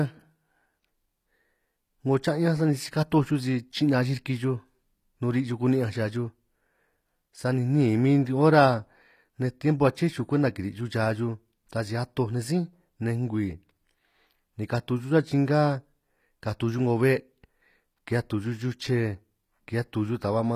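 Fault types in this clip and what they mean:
HE-AAC compression: The treble is rebuilt by copying lower bands upward rather than coded directly, so sibilants sound gritty and metallic throughout, with nothing above 14.9 kHz. The damage is plainly audible and likely comes from a low bitrate near 24 kbps.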